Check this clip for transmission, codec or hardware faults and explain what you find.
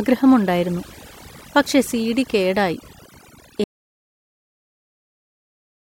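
Two faults are present in this speech clip.

Overdone noise removal runs throughout: an over-aggressive suppressor pulls frequency bands near its noise estimate far down, leaving twinkling specks in near silence.

An audio dropout to silence starts at 3.64 s and lasts to the end. The input was likely lost, leaving silence with no room tone, and everything after the cut is gone.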